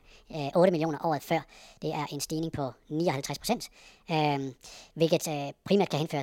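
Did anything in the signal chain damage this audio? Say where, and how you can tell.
Yes, at playback: a wrong sample rate throughout. Speech runs 1.5 times fast and about 7 semitones high together, which fits 32 kHz audio played at 48 kHz, unlike a pitch shift, which keeps tempo.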